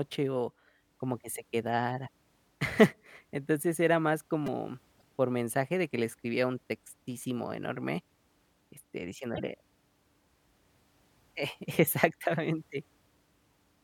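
At 4.47 s, just after "era más", a brief buzzy click sounds as one tiny slice of speech plays four times in a row with hard joins. This is a repeated buffer: fresh audio missed its deadline, so the device replayed its last block three extra times. The roughly 5 ms repeat points to a very small buffer, and a sliver of real speech went missing in its place.

From 4.98 to 5.03 s, right before "por mensaje de que", a stutter sounds as about 52 ms of speech plays twice. A second stutter, about 26 ms long, comes from 9.34 to 9.40 s. Both are repeated frames: compressed frames were written or sent twice, so the decoder played them again. This added time to the clip rather than replacing any. The lengths fit two frames and one frame of about 26 ms each.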